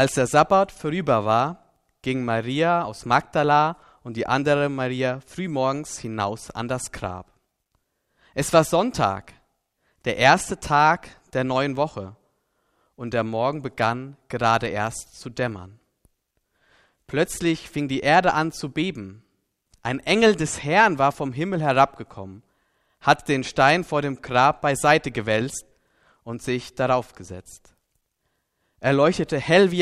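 No technical faults can be heard anywhere in this recording. There is nothing in the audio that calls for a time stamp or a fault description.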